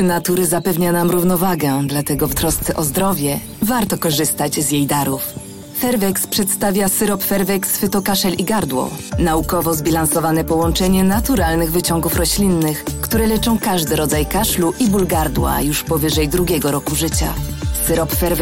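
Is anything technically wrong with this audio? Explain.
No, nothing technically wrong turns up on listening: level, continuity and frequency balance all hold steady across the audio.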